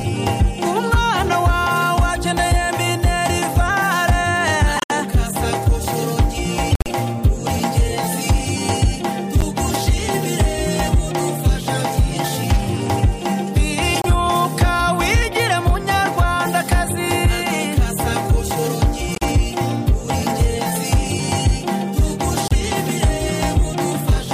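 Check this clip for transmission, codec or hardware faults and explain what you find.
Corrupt frames were decoded six times, at 4.76–4.91 s, 6.71–6.88 s, 9.40–9.48 s, 13.95–14.06 s, 19.12–19.23 s and 22.47–22.52 s. Damaged compressed frames, a few in each burst, were played with misread gains and codes, producing short chirps or noise bursts with error peaks of roughly -10 to 0 dBFS. Unlike a dropout, energy lands at the wrong frequencies rather than simply being lost.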